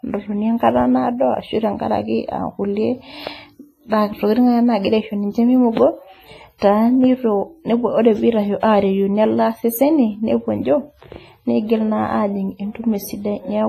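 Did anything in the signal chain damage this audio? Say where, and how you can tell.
Yes, at the codec stage: likely WMA compression near 24 kbps. Long transform blocks smear washy, ringing hiss throughout; the spectrogram shows zeroed weak partials and nothing above 15.1 kHz.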